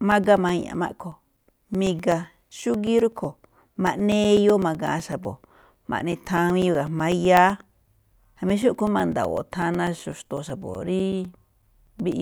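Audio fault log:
0.12 to 12.12 s, periodic USB or driver dropouts: every 0.125 s a few milliseconds of the speech signal drop to silence, giving an evenly spaced ticking through the voiced passages. A background task stalling the bus or driver at fixed intervals causes these regular gaps.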